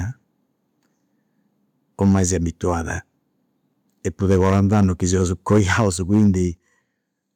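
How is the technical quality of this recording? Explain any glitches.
The recording has two related problems: repeated distortion on loud peaks and two sudden drops in level.

Microphone overload, at 2.01–2.23, 4.25–4.85, 5.13–5.24, 5.5–5.87 and 6.13–6.28 s: peaks run about 2 to 6 dB past the converter's limit and get flattened, giving the loudest speech a harsh crackle. The likely cause is input volume set too high.

Microphone volume stepped down, at 5.58 s (about 3 dB) and 6.57 s (about 8 dB): the level drops abruptly, likely because call software cut the input gain after the clipping.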